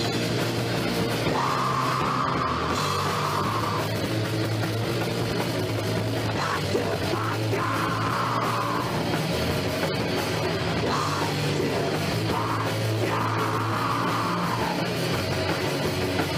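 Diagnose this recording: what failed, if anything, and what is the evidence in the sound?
From 3.92 s to 7.68 s the audio runs at about 1.86 times normal pace while its pitch stays unchanged, and it sounds rushed. This is a time-stretched section, likely from software time-scale processing that compressed the passage by dropping short pieces to fit a shorter length.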